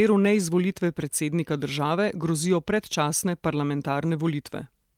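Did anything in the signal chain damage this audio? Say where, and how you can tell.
No, nothing in this speech recording stood out on listening as damage from any stage of the signal chain.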